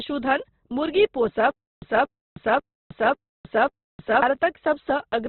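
A speech recording runs narrowband the whole way through, with nothing above about 4.1 kHz and a heavy grainy, rough texture in place of clean tone, likely Opus compression in its music (CELT) mode at a rate around 12 kbps. Starved bands are filled by folded or noisy content rather than left empty. On a spectrogram this appears as a hard ceiling at 4.1 kHz with a speckled, noise-textured fill below it instead of crisp harmonics. From 1.51 s to 4.22 s there is a stutter with silent gaps. A 231 ms fragment plays, then 312 ms of silence follows, and the pair repeats on an even 543 ms cycle, five times in all. This is likely a stalled stream replaying its last buffered piece on each retry, with the audio for that span lost. On the waveform it shows as identical bursts separated by flat gaps, and on a spectrogram as repeated matching blocks divided by empty columns.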